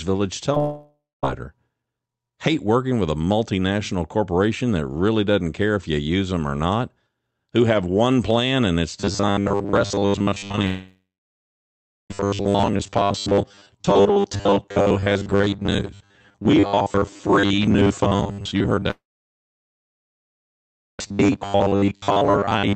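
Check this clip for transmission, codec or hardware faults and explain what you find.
Four kinds of transmission fault are audible: short concealed packet loss, three long network dropouts, robotic sound from repeated short buffers, and a burst of repeated packet loss. The audio passed through an Opus call path band-limited to 8 kHz.

Short concealed packet loss occurs at 0.52 s and again from 0.54 to 0.57 s. About 10 ms and then 20 ms of audio never arrived in time. The decoder extended the preceding sound across each hole and blended back into the real signal, which leaves a brief smear or wobble.

Long network dropouts occur from 0.59 to 1.24 s, 10.66 to 12.11 s, and 18.91 to 21.00 s, likely caused by interruptions in the network. The receiver stretches the last sound into a fading buzz. The rest of each gap is silent, about 0.23 s, 1.05 s and 1.99 s respectively. Audio resumes afterwards with the lost portions gone.

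Robotic sound from repeated short buffers runs from 9.00 s to the end. A steady 100 Hz buzz is imposed, which fits a 10 ms chunk being replayed whenever fresh audio failed to arrive. Most of this stretch is repeated material, so it sounds rigid and metallic while still roughly tracking the speech.

Repeated packet loss (robotic sound) appears from 10.41 to 10.64 s. Six short gaps, the longest 15 ms, are each patched by continuing the previous sound, covering roughly a quarter of the span. The result is choppy, clipped audio that leads straight into the second dropout.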